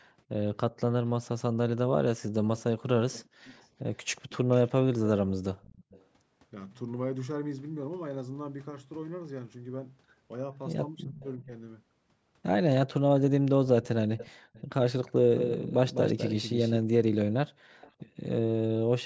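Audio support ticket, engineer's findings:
Echo leak, 2.57–4.71 s, 5.62–6.05 s, 13.83–15.12 s and 17.81–17.92 s: faint repeat of the talker trailing about 370 ms behind, roughly 20 to 30 dB down. Likely the far end's loudspeaker bleeding into its mic, with the echo canceller letting residue through.

Background gated by the echo canceller, 3.34–3.39 s: room tone punches out for about 50 ms, dipping as much as about 40 dB, then snaps back. Canceller clamped the mic hard while the loudspeaker was playing, then released.

Speech suppressed in double talk, 11.04–11.51 s: talker's level sags for around 300 ms in total, down roughly 20 dB at worst. Likely both ends talking at once, with the canceller unable to tell voice from echo and ducking everything.

Doubled audio track, 15.35–16.77 s: clean full-band second copy riding about 200 ms late, around 10 dB quieter, with no room tail, starting and stopping abruptly. 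Likely a second, slower capture path or an edit layering two copies out of step.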